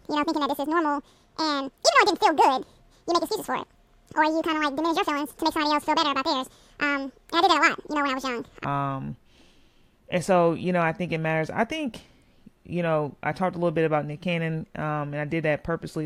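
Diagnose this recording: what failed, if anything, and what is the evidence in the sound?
From 0.0 to 8.65 s, a section at the wrong speed plays 1.89 times fast, so the speech is hurried and raised nearly ten semitones. The likely cause is playback or editing on a mismatched clock. A spectrogram shows harmonics stretched upward until dropping back at 8.65 s.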